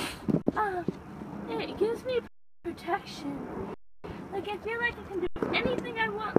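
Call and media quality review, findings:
Underrun with held sample, four dropouts: 0.42–0.46 s (46 ms), 2.28–2.65 s (372 ms), 3.74–4.04 s (299 ms), 5.27–5.36 s (93 ms). Output buffer starved; converter holds last value, so sound halts with little or no click and resumes softly where it stopped, nothing skipped. Waveform: flat line. Spectrogram: blank vertical band. Gap lengths fit 16384- and 4096-sample buffers at 44.1 kHz.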